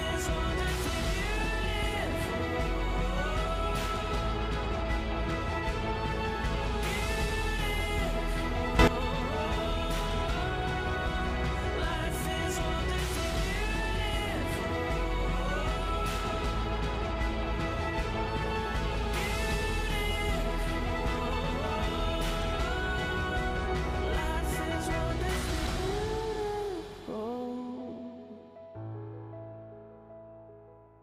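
From 8.79 to 8.88 s, a sudden gain jump lifts sound and noise together by about 12 dB. An unramped digital gain change is likely.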